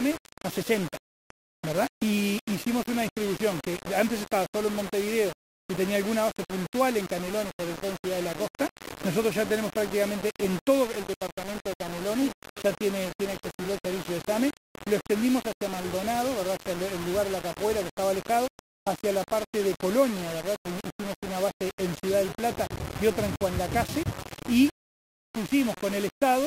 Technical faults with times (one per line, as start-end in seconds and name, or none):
0.00-26.46 low bit depth without dither
2.98-3.10 DAB burbling
10.30-10.59 DAB burbling
15.00-15.17 DAB burbling
22.76 DAB burbling